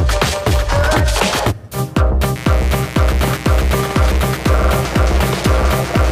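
From 2.35 s to the end, mains buzz enters. Spikes twice per 60 Hz cycle add a raspy drone, roughly 15 dB below the sound.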